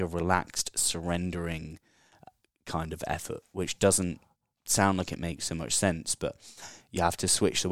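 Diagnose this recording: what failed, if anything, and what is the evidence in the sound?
No faults found in this recording.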